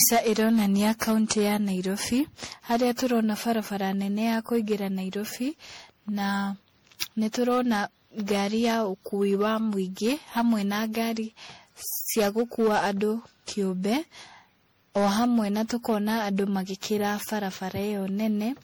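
Speech with generation loss throughout: a swirling, hollow, smeared quality, with consonant onsets blurred well beyond what one encode would cause. It is likely the result of repeated lossy encoding, around seven passes of MP3 at roughly 64 kbit/s, each requantising on a shifted frame grid so the damage compounds. On a spectrogram, expect mottled spectral holes and blurred vertical transients; content stops at about 21.6 kHz.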